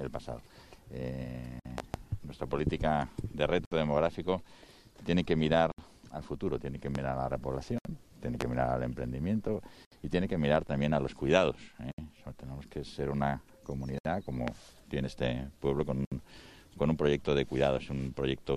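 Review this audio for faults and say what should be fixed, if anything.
Gaps at a join of encoded pieces open at 1.60, 3.65, 5.72, 7.78, 9.85, 11.92, 13.98 and 16.05 s. They recur every 2.0 s and last 55 to 67 ms. Untrimmed encoder start delay and last-frame padding leave silence where separately encoded segments meet. Prevent this by encoding continuously or trimming encoder delay and padding before joining.

Loud pops occur at 1.78 s (a double pop running to 1.98 s), 6.95, 8.41 and 14.48 s. They sit roughly 15 to 20 dB above the sound, likely from voltage transients such as plugs, switches or static. Prevent them by securing connections, grounding equipment and avoiding switching during capture.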